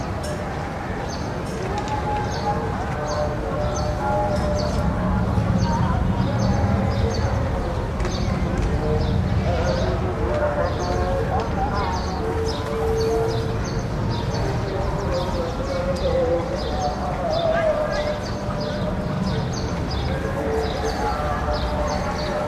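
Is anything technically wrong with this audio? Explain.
Yes, there's one fault. Around 19.16 to 19.20 s you get repeated frames: a 43 ms chunk of compressed audio, which fits a run of two frames, gets played a second time. That shows up as a quick stutter and stretches the audio by about 43 ms.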